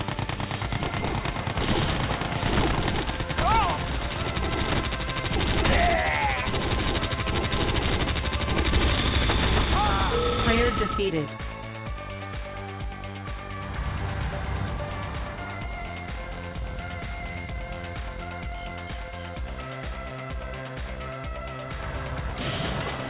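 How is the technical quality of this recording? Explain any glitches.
The technical quality is compromised by one fault running through the whole recording: aliasing. The audio behaves as though it was brought down from 48 kHz to 8 kHz with no anti-aliasing filter first, so everything above the new 4 kHz limit folds back below it at unrelated frequencies. Those folded components sit fairly close to the real content, not far below it, giving bright sounds a gritty, metallic edge. On a spectrogram, energy runs hard up to 4 kHz with mirrored, inharmonic traces beneath it.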